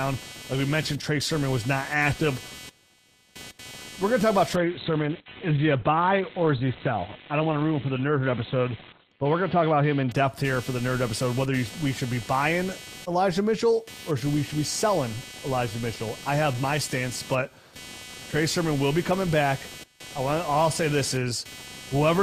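Computer activity noise runs from the start to the end of the clip: a buzzy, chirping pulse at roughly 300 times a second, sitting around 20 dB below the speech. Changing load on the computer's processor, graphics or mouse shifts the ground that the audio circuitry shares, and that disturbance leaks into the signal. The buzz therefore rises and falls with what the machine is doing, not with the speech.

A call bitrate drop lasts from 4.57 s to 10.67 s. The call's bandwidth estimate collapsed, so the encoder was forced to spend far fewer bits. What is heard fits a fall from about 32 kbps to 8 kbps. The speech turns rough and watery, and the top end goes muffled as the cut-off falls from 20 kHz to 4 kHz. It stays at its worst for about 4.3 s before clarity returns.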